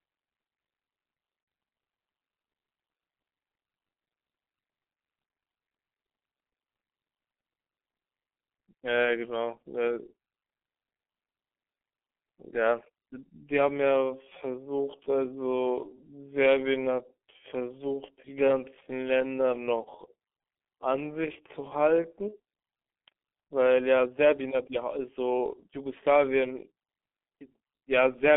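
Speech throughout sounds muffled and hoarse, squeezed into a narrow telephone band of roughly 250 Hz to 3.4 kHz, with consonants blurred. That heavy damage is the signature of the G.723.1 codec, whose coarse 30 ms frames and slowly updated voice model fit a rate near 6.3 kbit/s. From 13.80 to 22.10 s the pace abruptly slows to about 0.6 times normal while the pitch stays put, so the speech drags. The likely cause is a time-stretched section, where software lengthened the passage by repeating short pieces rather than resampling it. Just after, from 22.28 to 22.36 s, the sound briefly stretches out and fades before recovering weakly. That is VoIP packet loss concealed by the speech codec, which points to a single lost 30 ms frame. The decoder filled it by extrapolating its last pitch and filter, and the effect persisted into the following frames.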